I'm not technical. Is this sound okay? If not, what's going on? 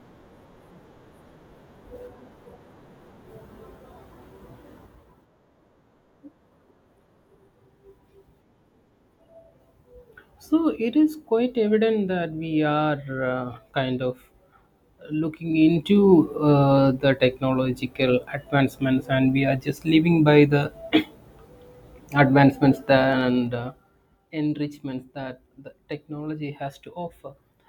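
No. Twice the volume is moved in small jumps instead of a smooth glide, causing zipper noise: while the speech gets louder from 15.3 to 16.2 s and quieter from 22.96 to 24.15 s, you hear a rapid ticking, about ten clicks per second.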